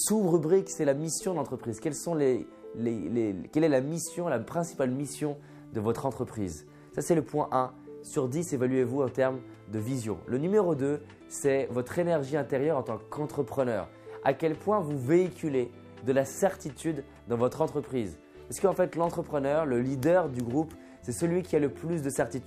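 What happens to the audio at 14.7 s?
Nothing goes wrong at 14.7 s; the audio plays through that moment intact, with no dropout, click, glitch or other fault.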